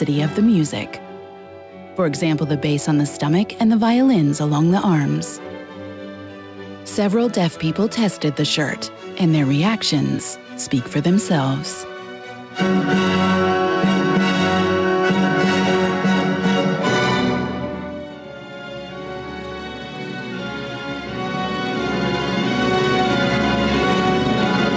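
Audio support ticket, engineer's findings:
Gain pumping, whole clip. Input gain likely set far too high, with a fast limiter pulling level down on each loud sound. Level ducks by around 5 dB under peaks; dynamics squashed. Band stops at 8 kHz, consistent with a G.722-type call codec.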